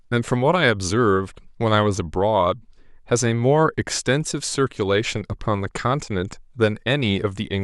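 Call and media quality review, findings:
Nothing to flag on this one; I listened through the speech and found no faults worth logging.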